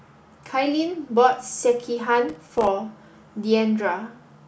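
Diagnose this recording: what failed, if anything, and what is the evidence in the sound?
The failure is in the driver and buffer stage: processor overload crackle from 2.29 to 2.67 s. Across that stretch the speech is broken by a rapid run of tiny silent gaps with hard edges, heard as gritty tearing that stops once the load passes. The gaps are very short, which fits buffers of around 2 ms being missed a dozen or more times across the stretch. That sets it apart from network packet loss, whose gaps run longer and are usually smoothed over.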